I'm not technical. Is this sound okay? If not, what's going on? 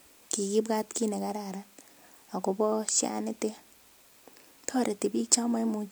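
Yes, there's nothing wrong here.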